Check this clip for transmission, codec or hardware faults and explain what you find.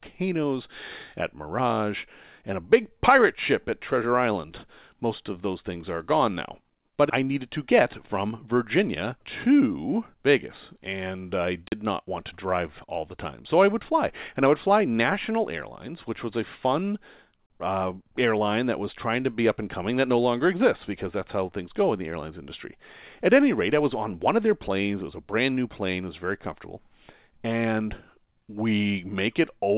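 Two blocks of digital silence interrupt the speech, each about 40 ms long: at 11.68 s, between "and I" and "not want to drive", and at 17.46 s, between "which was a fun" and "uh airline that was". In each case the output buffer was likely left unfilled, so the samples drop abruptly to silence and return, producing a short hole. A waveform shows a flat line at silence, and a spectrogram shows a blank vertical gap. Through the telephone-band call path, nothing appears above 4 kHz, which fits G.711 mu-law coding.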